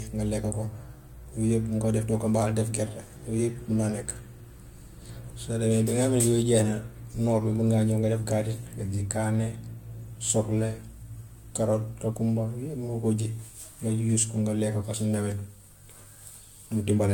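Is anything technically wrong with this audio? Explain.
Yes. Throughout the speech there is generation loss. The audio was most likely encoded and decoded several times in a row, around four passes, with a lossy codec whose character fits AAC-LC at roughly 96 kbit/s. Each pass quantised the signal again on a shifted frame grid, so errors and gaps compounded. The result is a swirly, hollow, smeared tone with softened consonant onsets, and nothing remains above 17 kHz.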